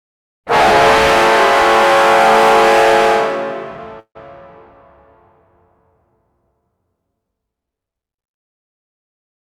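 A call audio freeze runs from about 4.00 to 4.17 s: the last sound stretches into a fading buzz that drops to silence for roughly 90 ms, then the audio resumes where it stopped, now 154 ms late with nothing lost, likely because delayed packets left the jitter buffer empty.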